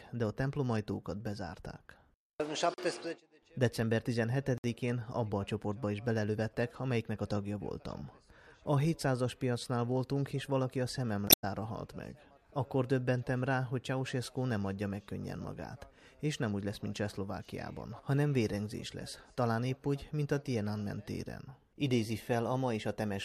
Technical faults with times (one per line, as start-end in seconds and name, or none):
2.74-2.78 block of digital silence
4.58-4.64 block of digital silence
11.25-11.44 damaged data in a compressed stream